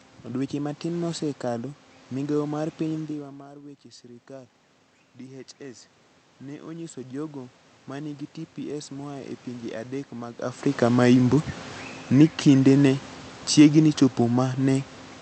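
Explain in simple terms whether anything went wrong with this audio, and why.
One thing went wrong here: automatic gain rising. From about 5.2 to 9.8 s, the input got much quieter, so the gain control slowly turned itself up, and the voice and room noise swell together until just before "adek mag".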